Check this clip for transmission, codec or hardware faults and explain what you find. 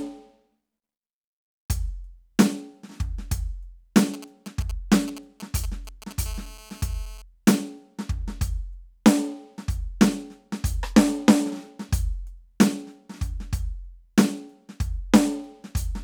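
Two bits of mobile-phone interference sit in the music, back to back.

From 4.14 to 6.13 s there are GSM signalling bursts: a nearby 2G phone's sporadic radio pulses, rectified by the audio circuitry, galloping as ticks and short 217 Hz buzzes, roughly 15 dB under the music.

From 6.26 to 7.22 s comes steady GSM phone buzz: continuous call-mode transmission rectified into a hard, raspy 217 Hz drone full of harmonics, about 23 dB below the music.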